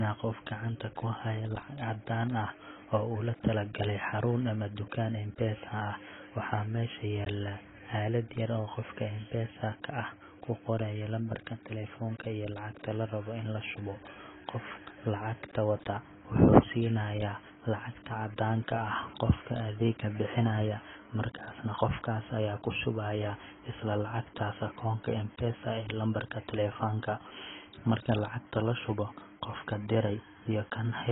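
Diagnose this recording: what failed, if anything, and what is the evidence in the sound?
AAC compression, heavy, throughout the clip: the speech has nothing above 3.8 kHz, and sibilants and held vowels warble and fizz. This is likely the codec stage, with AAC-LC starved of bits, lowering its cut-off and leaving spectral holes. That fits roughly 16 kbps.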